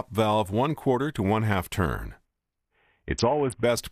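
The audio shows a Bluetooth SBC bit pool drop from 2.25 to 3.63 s: treble dulls and gritty quantisation noise rises, which fits the bit pool falling from 31 to 5, near 50 kbps. Unlike plain low-pass filtering, grit accompanies the dulling, and the sound never drops out.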